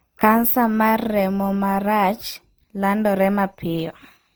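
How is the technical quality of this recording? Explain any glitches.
The recording has one fault across the whole clip: generation loss, running from start to finish. The speech sounds swirly, smeared and hollow, with blurred consonant attacks, though content still reaches up to about 20.2 kHz. The likely cause is repeated lossy coding, around five passes through something like Opus at 48 kbit/s. Each decode and re-encode quantises afresh on a shifted frame grid, so the noise piles up.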